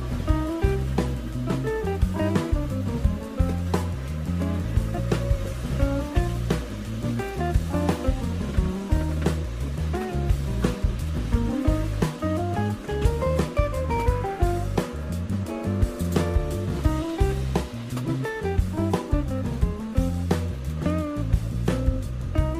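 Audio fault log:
No audible faults detected.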